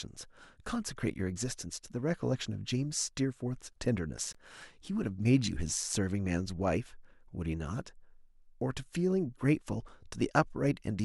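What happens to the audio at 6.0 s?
Nothing goes wrong at 6.0 s; the speech continues cleanly through that moment with no dropout, click or distortion.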